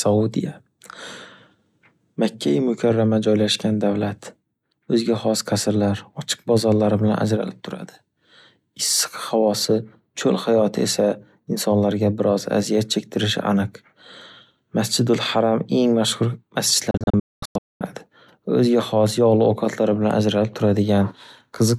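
At 16.91 s the speech breaks up in a digital broadcast dropout that lasts until 17.81 s. The receiver stopped getting clean frames and muted its output each time one failed. Across that 0.9 s span about 0.67 s of audio is missing. The gaps come as several short holes, not one silence. The longest hole runs 224 ms. Each mute fades in only 3 ms, so the cuts sound abrupt. Whatever was said in the holes is gone.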